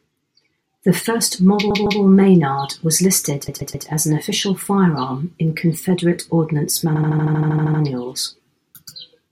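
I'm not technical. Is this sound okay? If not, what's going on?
No. The speech stutters three times because of repeated frames: short pieces of the coded audio were stored or sent twice or more, so the player plays them again. A 157 ms piece plays two extra times from 1.70 to 2.01 s, a 131 ms piece three extra times from 3.48 to 3.87 s, and a 78 ms piece eleven extra times from 6.95 to 7.81 s. Unlike a dropout, nothing goes missing. The clip just gets longer.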